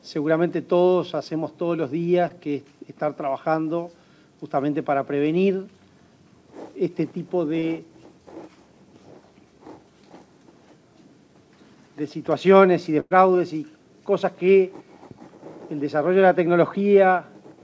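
At 2.28–2.32 s and again at 7.60–7.64 s there is a short concealed packet loss. About 20 ms of audio never arrived, and the receiver filled it by extending the preceding sound. It is heard as a brief smear or wobble. On a spectrogram, harmonics or noise flatten into a smooth patch, with a slight seam where real signal resumes.

From 13.00 to 13.15 s comes a burst of packet loss. Roughly 100 ms went missing, and the receiver kept the last sound going as a held buzz or hiss that fades, then gives about 20 ms of silence before the audio picks up further on. The waveform shows a decaying, repetitive stretch dropping to a flat line. In the spectrogram, frozen, dimming bands end in a blank gap, all below the 8 kHz ceiling left by the call codec.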